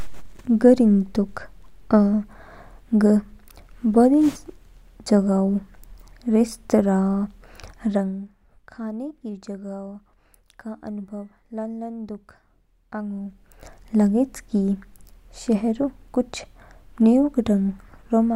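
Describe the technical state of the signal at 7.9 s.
At 7.9 s the gain is being stepped instead of smoothed. This is zipper noise, running from 7.85 to 8.24 s, as the level falls by about 15 dB in roughly 200 abrupt increments a second. Each jump leaves a tiny click, so a fast ticking buzz rides on the speech until "खाने की".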